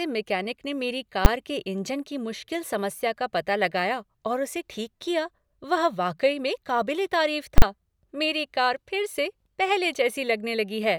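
Speech clip with two bursts of invalid numbers at full scale: a single bang at 1.25 s from a 10 ms block, and a 7.58 to 7.62 s block heard as loud pops at each edge with nothing between. Invalid values were clamped to maximum. Waveforms show flat slabs held at one extreme far beyond the speech peaks, spectrograms broadband vertical lines at the edges.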